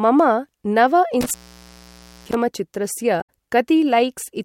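A speech clip with an intermittent contact from 1.21 to 2.34 s: the line opens for about 0.92 s, crackling at each edge and leaving faint hiss, unlike a clean digital dropout. At 3.18 to 3.29 s, damaged data in the compressed stream makes the decoder lose sync and search for the next frame header.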